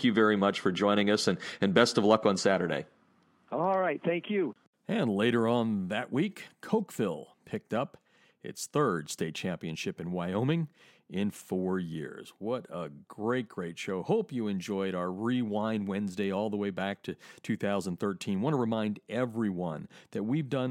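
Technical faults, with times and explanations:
No technical faults can be heard anywhere in the speech. There is nothing to report against any time in the recording.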